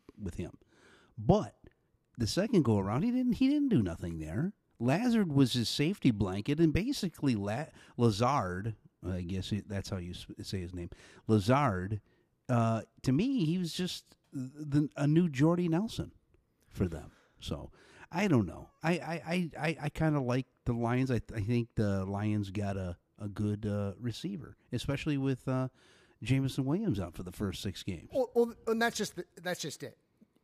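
Listening through the speech recording, nothing stood out as a technical problem at any point.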